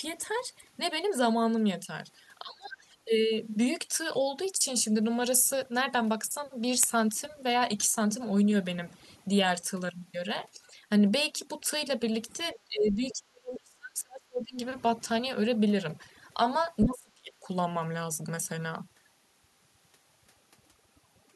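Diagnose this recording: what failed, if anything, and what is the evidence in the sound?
Overdone noise removal is running through the whole call, so this is call processing. The background sits near silence with twinkly specks. The suppressor is cutting individual bands whenever they look like noise, taking quiet speech detail with them.

Speech suppressed in double talk, also at the call-processing stage, shows up three times: 2.42 to 2.77 s, dipping about 25 dB; 12.65 to 14.6 s, about 30 dB; and 16.84 to 17.36 s, about 40 dB. The talker gets ducked, likely because the echo canceller mistook overlapping far-end speech for echo.

Other side's voice leaking through is a brief scrap of a second voice at 12.55 to 12.59 s, roughly 25 dB under the talker. It's likely loudspeaker echo the canceller didn't fully subtract, and it comes just before the long suppression at 12.65 s.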